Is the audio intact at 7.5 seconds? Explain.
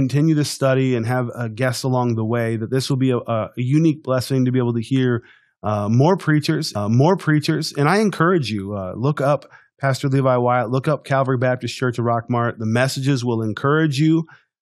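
No. From 6.75 to 7.74 s a stream segment repeated: the player queued the same chunk twice, so just after "hear uh more preachers" about 1.0 s of speech replays after a small blip. Unlike a stutter's rapid short loops, one full second recurs once.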